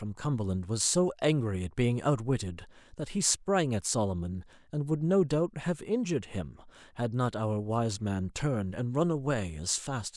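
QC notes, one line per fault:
No faults heard in this speech recording. Nothing needs logging at any point.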